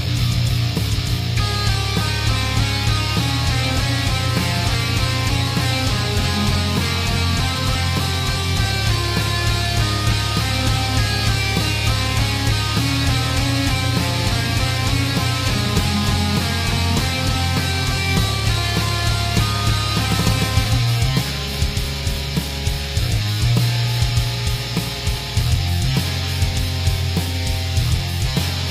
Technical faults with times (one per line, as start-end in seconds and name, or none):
none